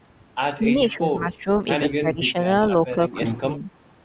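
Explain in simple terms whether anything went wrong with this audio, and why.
Something did go wrong: the likely cause is speech suppressed in double talk, where an echo canceller on the call couldn't tell the talker apart from the other side's sound coming through the loudspeaker, so it turned both down. You can hear the speech sink in level and partly drop away in four places: 0.58 to 0.70 s, 0.88 to 1.49 s, 1.87 to 2.35 s, and 2.88 to 3.65 s. The first and third dips are the deeper ones.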